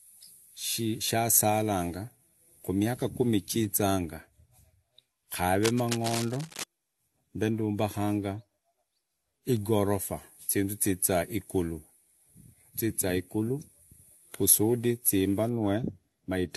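A worn cable or connector was likely being moved, its contact resistance fluctuating rapidly, from 5.63 to 6.64 s. This cable scratch noise lays dense, uneven crackling bursts over the speech, heard as scratching and rustling roughly 10 dB below it.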